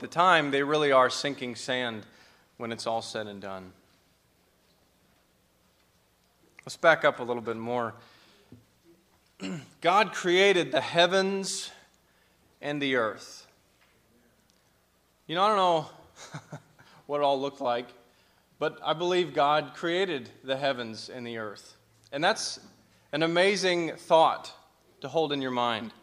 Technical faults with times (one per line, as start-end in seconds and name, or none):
none